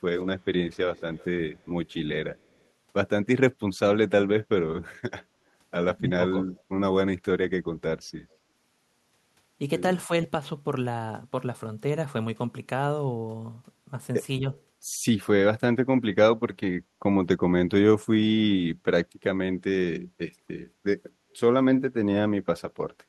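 Echo leak at 0.72–0.77 s and 0.95–1.25 s: a faint copy of the speech trails it by 229 ms, about 30 to 40 dB below the original. This is likely a loudspeaker's sound getting past an echo canceller and being sent back.

Speech suppressed in double talk at 5.98–6.47 s: the voice drops in pieces by up to about 15 dB, around a fifth of a second in all. This is likely an echo canceller mistaking overlapping talk for echo and turning it down.

Echo leak returns at 8.32–8.36 s, very faint, about 40 dB down. Speech suppressed in double talk at 14.40–14.45 s is a brief, shallow dip of about 5 dB. Echo leak follows at 14.53–14.61 s, again 229 ms behind and about 35 dB down.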